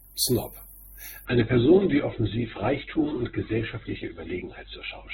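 A speech recording that drops to a lower-bitrate adaptive stream at 1.25 s and stays there. Treble vanishes above 4 kHz, with added codec artefacts, consistent with a slowed connection.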